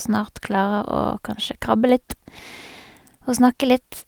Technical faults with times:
none

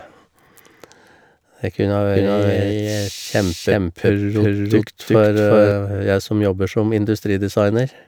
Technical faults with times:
2.15-5.71 doubled audio track

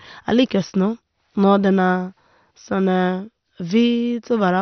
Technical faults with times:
0.00-4.61 MP2 compression

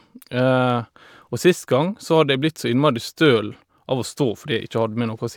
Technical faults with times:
0.12-5.36 clock slip clicks

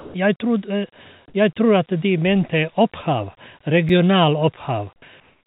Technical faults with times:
0.00-0.14 sound dropped by the voice detector
3.89 block of digital silence
5.20-5.46 comfort noise in place of the background
5.44 onset clipped by the voice detector

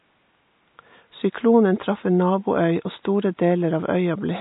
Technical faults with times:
0.00-4.41 MP3 compression

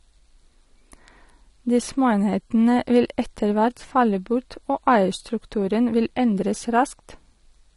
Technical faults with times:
0.00-7.76 AAC compression

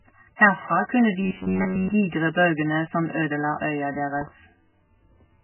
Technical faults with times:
0.00-5.43 MP3 compression
4.21-4.30 loud pop

